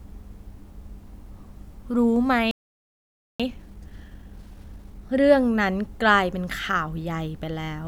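At 2.51 s the speech just cuts out and sits in silence until 3.40 s, a gap of about 0.88 s. That's a playback stall, most likely the player running dry of data or its thread getting blocked before output could resume.

Right after, from 3.40 s to 5.16 s, you get time-compressed catch-up. The player is working through its backlog by snipping out small chunks and cross-fading across them, so the speech comes out about 1.5 times faster at its normal pitch.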